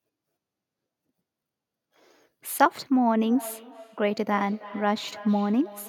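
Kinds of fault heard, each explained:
Feedback echo between two devices: a second device replays the call into the microphone, so from 3.23 s the speech returns roughly every third of a second, about 18 dB down.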